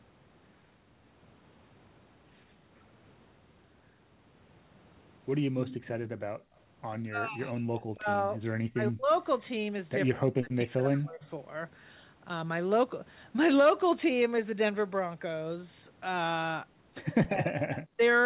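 Between 5.63 and 5.88 s, a delayed copy of the speech trails the talker by 120 ms, about 15 dB down. This is an echo leak. The far end was likely on a loudspeaker, and its echo canceller let part of its own microphone pickup slip back. The fixed 120 ms offset is what distinguishes it from room reverberation, which smears continuously rather than repeating at a set lag.

From 6.37 to 6.55 s, the background gated by the echo canceller drops out for about a fifth of a second, by as much as about 33 dB, and then returns. The canceller clamped the microphone while the loudspeaker was playing. Only the ambient bed vanishes, so it sounds like a brief hole in the room rather than a damaged word.

From 7.0 to 9.09 s, the talker's speech is suppressed in double talk, with about one and a half seconds of it turned down, dipping by roughly 35 dB at worst. Both sides were likely speaking at once, and the canceller, unable to separate them, ducked the near talker. 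Unlike the background gating, the voice itself is turned down.

The same double-talk suppression recurs from 10.11 to 11.22 s and from 17.27 to 18.01 s. Short echo-leak scraps appear at 9.13 to 9.18 s, 11.22 to 11.28 s and 17.75 to 17.79 s, again about 120 ms late and about 25 to 35 dB down. Throughout, the G.711 call path limits the audio to 4 kHz.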